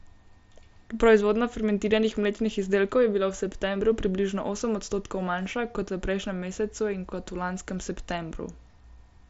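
Nothing technically wrong can be heard in this speech clip. It comes through a Bluetooth mSBC headset link, which limits the audio to about 8 kHz and leaves only light coding damage, consistent with mSBC at around 60 kbps.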